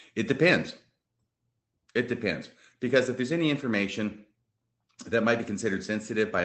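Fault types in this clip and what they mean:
Nothing stood out on listening to this speech, which carries the ordinary character of a voice call.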